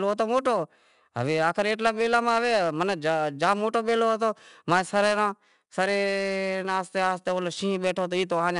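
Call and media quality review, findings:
Gritty hiss tracks loud speech throughout; sharp attacks distort. 4-bit ADPCM compression: coarse adaptive steps lag transients. Band ends at 10.7 kHz, consistent with roughly 89 kbps.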